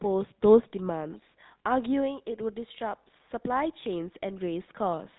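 From start to finish the speech carries GSM full-rate codec damage, and it is plainly audible. The codec models the vocal tract as a filter and excites it with a sparse, regularly spaced pulse train, so fine detail in the excitation is discarded. The result is a buzzy, gravelly roughness on every voiced stretch, with the character of the 13 kbps full-rate mode. Nothing survives above 3.8 kHz, leaving the sound narrow and dull.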